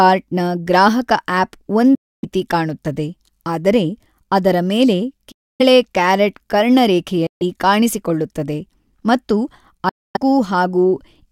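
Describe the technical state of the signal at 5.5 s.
A Bluetooth dropout runs from 5.31 to 5.62 s, and 5.5 s falls inside it. For about 0.3 s the speech simply vanishes into silence, then returns. It does not pick up where it stopped: the lost stretch, about 0.28 s of sound, is skipped, as though the audio kept playing through the hole. That gap is likely from packets arriving too late at the headphones and being discarded, which fits roughly a dozen lost frames.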